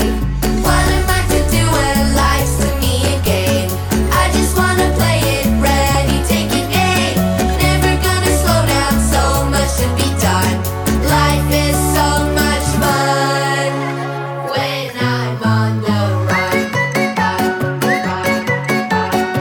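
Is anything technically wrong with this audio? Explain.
Yes. At 3.26 s and 5.95 s, a repeated buffer: fresh audio arrived late, so a roughly 3 ms block, which fits a 128-sample buffer, played three times, giving a brief click-like buzz.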